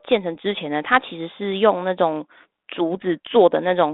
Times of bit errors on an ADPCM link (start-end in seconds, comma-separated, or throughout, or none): 0.35-0.43, 2.97-3.03